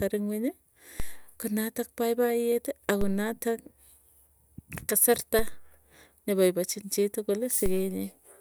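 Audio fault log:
1.00 s and 3.01 s, DC step: the zero line of the speech waveform jumps abruptly by about -21 dBFS at each of these two points, then bleeds away over roughly a tenth of a second, the kind of slow recovery you'd get from a high-pass sitting around 2 Hz. The sudden shift is what you hear as a low thump each time, while the speech itself carries on untouched on top of the moving baseline.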